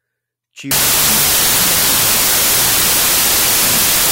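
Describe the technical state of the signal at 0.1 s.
At 0.1 s the signal is intact, with no audible technical fault at that moment.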